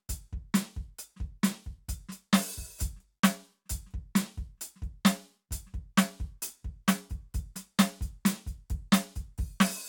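No faults to report on this music clip: nothing audible breaks, drops, or distorts at any point.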